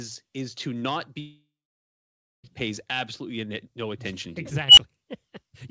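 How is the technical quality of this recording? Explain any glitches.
The recording has two clear glitches, heard over a call path that passes nothing above 8 kHz.

From 1.20 to 2.46 s the sound stops and is replaced by a concealment buzz that fades, leaving about 0.93 s of silence. This is likely a long network dropout, with about 1.24 s of audio lost. A spectrogram shows a smeared band thinning into an empty gap.

From 4.68 to 4.78 s an unstable filter runs away. A tone around 3 kHz swells over about 90 ms to clipping, then cuts to roughly 10 ms of silence as the overflowed filter resets. The waveform shows a growing flat-topped burst, then a flat line.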